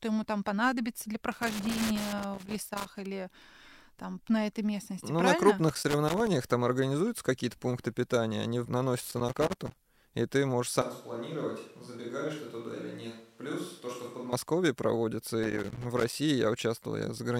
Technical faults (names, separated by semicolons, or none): loose connector crackle; switch to a distant microphone